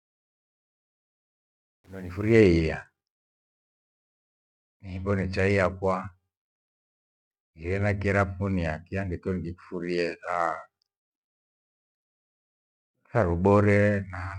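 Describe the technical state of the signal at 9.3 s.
At 9.3 s the speech signal is intact, with no audible fault at that moment.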